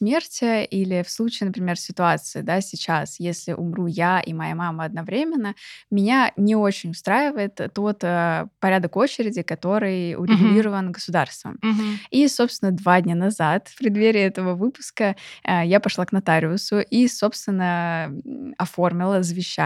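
A speech recording in which no technical fault can be heard at any point.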